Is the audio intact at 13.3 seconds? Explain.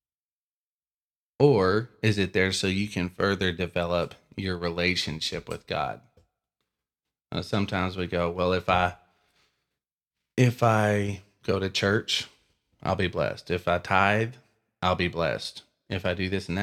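Yes, the speech at 13.3 seconds plays through intact, with no audible fault at that moment.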